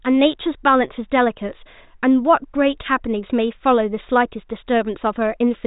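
No technical faults are present in the speech; it passes through a G.726 ADPCM telephone path that leaves nothing above about 3.8 kHz and adds at most a faint coding hiss, which points to the higher 40 kbit/s rate.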